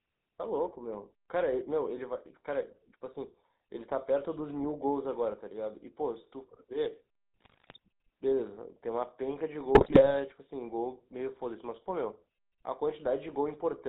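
A speech recording heard through the GSM full-rate codec, which fits a 13 kbps stream. Nothing above 4 kHz survives, and the pulse-driven vocal model leaves a plainly audible buzzy, gravelly roughness throughout. GSM bit errors strike from 7.40 to 7.78 s and again from 9.74 to 10.07 s. Corrupted filter, pitch and gain values there make the speech squawk, pop and gargle.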